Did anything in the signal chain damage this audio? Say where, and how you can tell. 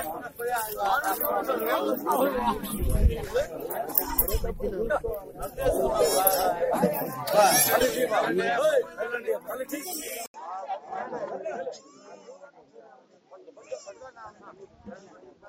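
Yes. At 10.26 s there's an 80 ms dropout, and from there to the end the sound goes noticeably duller: nothing above 7.4 kHz, a few dB quieter, with a new noise floor sitting roughly 40 dB down. That's an input switched to a poorer device at the driver stage, likely the system handing capture to a second mic or a headset profile. The narrower band, different level and fresh hiss all come from that new hardware.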